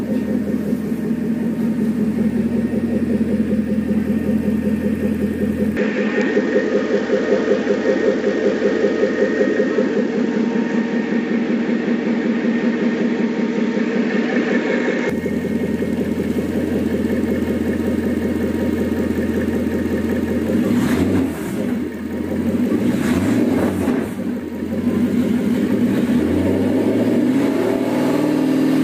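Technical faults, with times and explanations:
5.77 to 15.10 s, input switched to a poorer device: the sound suddenly loses its top end, with nothing left above about 7.6 kHz, so it goes duller and a bit boxier, then opens back up at 15.10 s. There's no gap at either switch and the level barely moves, but a faint new noise floor, roughly 40 dB down, comes in with it. That points to the input likely being handed to a narrower-band microphone or headset profile for that stretch.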